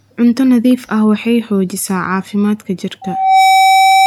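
At 3.01 s a loudspeaker feedback squeal begins and continues to the end of the clip. A microphone is picking up the loudspeaker it drives, and at 771 Hz the loop gain has passed unity, so that one frequency reinforces itself on each trip around. It swells over roughly 0.4 s into a piercing whistle that ends up a few decibels louder than the speech. That build-up sets it apart from a steady hum or interfering tone, which would stay at a fixed level.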